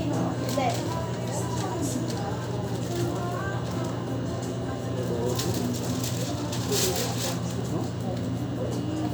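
Nothing stood out on listening to this recording of sounds.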